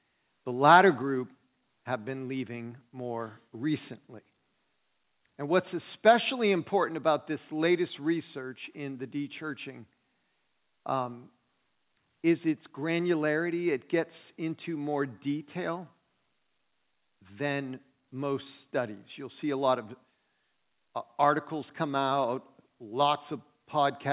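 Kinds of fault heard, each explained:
Microphone overload: Between 0.68 and 0.80 s the loudest peaks are flattened, pushed about 4 dB past the converter's limit with a few percent of samples clipped, giving a harsh crackle. The likely cause is microphone input gain set too high for the converter.
Microphone volume stepped down: The whole signal, speech and background together, drops abruptly by about 3 dB at 1.02 s, just after the clipped peak, and by about 1 dB at 6.81 s, right before "about this latest research". This is likely the call software cutting the input gain in single steps.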